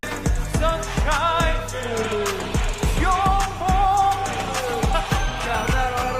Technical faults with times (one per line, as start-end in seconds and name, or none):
none